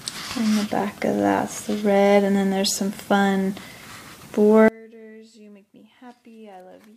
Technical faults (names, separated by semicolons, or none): one channel inverted